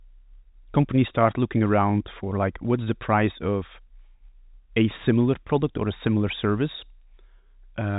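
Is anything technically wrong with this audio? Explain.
No, nothing is technically wrong with this audio; it is telephone-band speech with nothing above about 3.8 kHz, as expected from G.711 coding.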